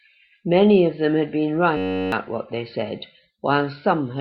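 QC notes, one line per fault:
1.77 to 2.12 s, system hang loop: the system froze and the hardware kept replaying one 10.67 ms slice of its buffer, which fits a 512-sample ring, 33 times over, so you get a steady buzz at about 94 Hz and lose around 0.4 s of the speech.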